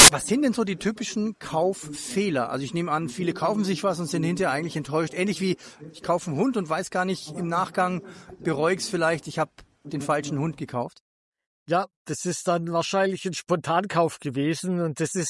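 Right at the start, from 0.00 to 0.08 s, a short blast of harsh, very loud static cuts in with hard edges and stops just as abruptly. This is file tags played as audio: the decoder has read the embedded cover picture stored with the file as though it were sample data. Because the image is compressed, its bytes look essentially random, so they come out as very loud white noise rather than anything recognisable.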